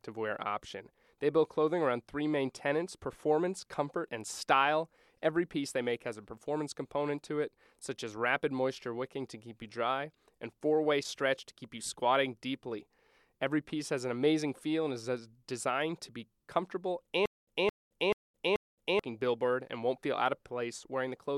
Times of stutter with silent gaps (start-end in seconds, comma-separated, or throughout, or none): 17.26-18.99